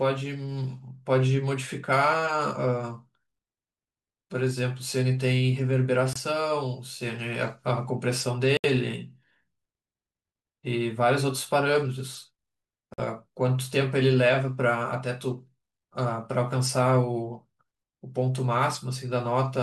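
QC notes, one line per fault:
6.13 to 6.17 s, Bluetooth dropout: the speech cuts to silence and resumes further on, about 23 ms missing, likely one late wireless frame discarded.
8.57 to 8.66 s, Bluetooth dropout: a longer hole of about 70 ms, consistent with three lost frames, likely packets arriving too late and dropped, so speech resumes as if it had continued.
12.94 to 13.00 s, Bluetooth dropout: silence of about 46 ms, which fits two lost frames, likely dropped in transit before playback, so the speech jumps ahead on return.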